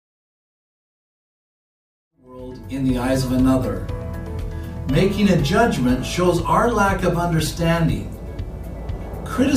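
The signal shows no technical faults, and the only level change is a smooth fade-in that begins at around 2 s and reaches full level by 3.35 s with no click or hard edge.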